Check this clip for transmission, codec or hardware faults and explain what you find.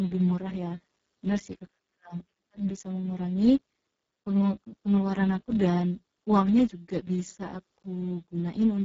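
One codec fault runs through the whole speech clip: Speex coding at a very low setting, with heavy damage that fits a rate near 6 kbps. Too few bits reach the CELP excitation, so voicing turns hoarse and noisy. Unlike broadband hiss, the roughness follows the speech, and nothing is present above 7.7 kHz.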